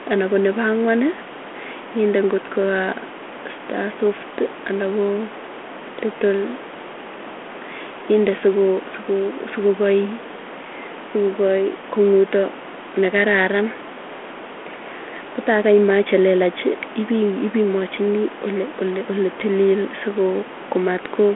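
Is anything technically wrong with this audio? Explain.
No, nothing is technically wrong: the speech sits in a telephone band of roughly 250 Hz to 3.4 kHz through a 32 kbit/s G.726 link with only light coding wear, and room noise stays about 19 dB under it.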